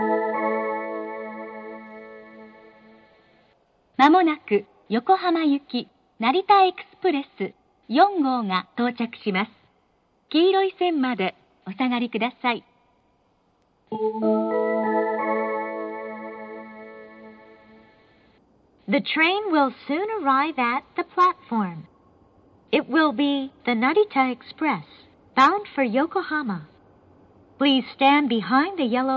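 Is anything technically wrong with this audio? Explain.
No, no technical faults heard.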